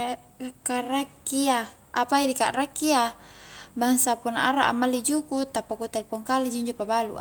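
No technical faults can be heard in this speech recording, so there are none to describe in time order.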